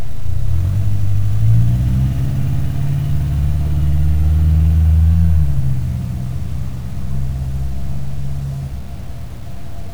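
From start to finish the audio carries a grainy, rasping distortion that rides on the sound itself, roughening quiet passages and making the faintest moments sputter or drop out rather than fade smoothly. This is low bit depth without dither, most likely a reduction to around 7 bits by truncation, which leaves error that tracks the signal at roughly 35 dB below it instead of settling into a steady, neutral hiss.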